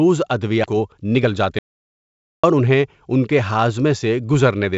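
Speech carried over a call path whose G.722 coding leaves nothing above 8 kHz. At 0.64 to 0.66 s there is a skip ahead: roughly a second of speech was discarded and the two sides were joined almost directly. From 0.73 to 3.13 s, jitter buffer speed-up trims pitch-period slices to shed about 0.3 s of queued delay, so the speech runs at 110% speed with unchanged pitch and sounds hurried. At 1.59 to 2.44 s an audio dropout to silence leaves 849 ms of silence with no room tone, most likely from the input being cut off while recording continued.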